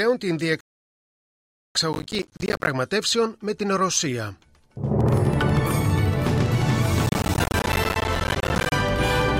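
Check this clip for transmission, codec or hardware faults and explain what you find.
Three kinds of fault are audible: a playback stall near the start, two bursts of processor overload crackle, and a regular train of clicks over the second half.

Rebuffering stall, 0.61 to 1.75 s: the player exhausted its downloaded audio and had to wait for more data before continuing. The sound cuts to silence and then picks up exactly where it left off, so nothing is skipped, but the pause adds about 1.15 s to the running time.

Processor overload crackle, 1.93 to 2.67 s and again 7.06 to 8.72 s: the processor fell behind and repeatedly failed to deliver its audio buffers on schedule, which fits buffers of roughly 10 ms. Each missed buffer was output as silence, so the sound is punched with dozens of tiny hard-edged gaps, around forty in the first burst and around seventy in the second, heard as a gritty tearing crackle that stops once the load eases.

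Train of clicks, 5.01 to 9.38 s: a steady sequence of similar pulses, about 12.4 per second at even spacing, some fifty in all, each peaking roughly 5 dB above the surrounding sound. The ticking sits on top of the audio and continues through its quieter moments, overlapping the second crackle burst. The likely source is electrical interference from nearby equipment or a faulty connection or power supply injecting pulses into the signal.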